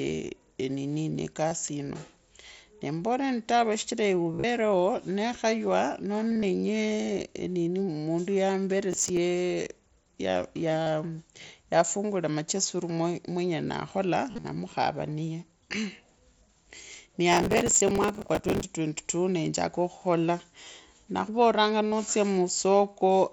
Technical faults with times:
1.49-1.51 concealed Bluetooth headset packet loss
4.32-4.44 concealed Bluetooth headset packet loss
6.31-6.43 concealed Bluetooth headset packet loss
8.92-9.17 processor overload crackle
10.83-10.87 concealed Bluetooth headset packet loss
14.29-14.44 concealed Bluetooth headset packet loss
17.33-18.64 processor overload crackle
20.64 concealed Bluetooth headset packet loss
21.88-21.92 concealed Bluetooth headset packet loss

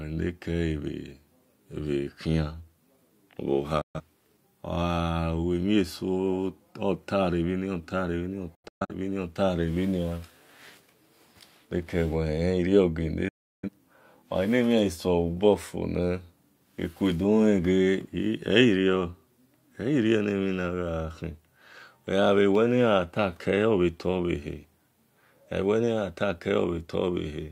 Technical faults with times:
3.81-4.00 digital broadcast dropout
8.55-8.94 digital broadcast dropout
13.28-13.69 digital broadcast dropout

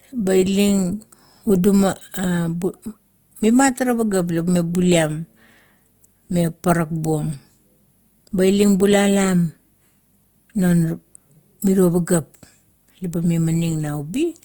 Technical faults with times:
0.00-14.45 Opus compression

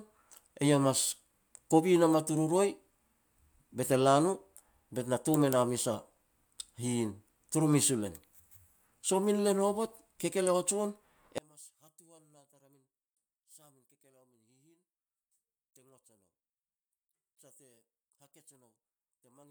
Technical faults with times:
11.38-19.50 one channel inverted

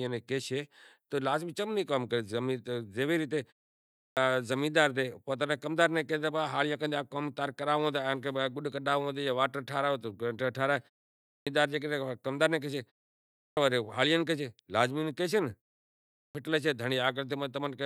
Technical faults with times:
3.87-4.17 clipped start after a pause
11.19-11.47 clipped start after a pause
13.26-13.57 clipped start after a pause
16.02-16.35 clipped start after a pause

